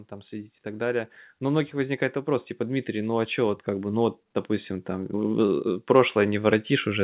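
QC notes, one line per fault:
0.29–7.04 s, automatic gain rising: the gain control judged the input too quiet and kept raising its gain right to the end, so speech and background swell together. The waveform envelope widens steadily, and the spectrogram darkens evenly below its 4 kHz ceiling.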